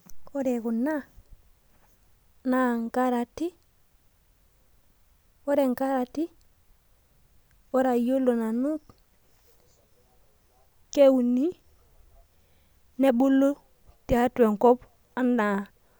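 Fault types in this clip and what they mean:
No faults can be heard.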